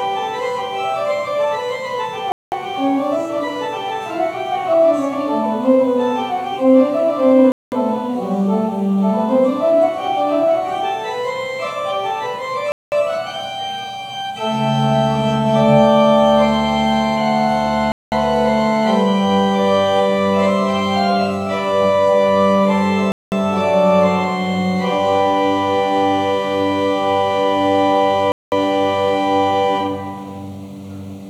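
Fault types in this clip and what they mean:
Gap between chunks: the audio was delivered in 5-second chunks, and each join was left with about 200 ms of silence instead of running straight into the next chunk. Nothing is dropped, but the sound stops abruptly and resumes just as sharply, producing hard-edged holes at 2.32, 7.52, 12.72, 17.92, 23.12 and 28.32 s. They recur every 5.2 seconds, a steady rhythm that points to the chunk boundaries rather than the material itself.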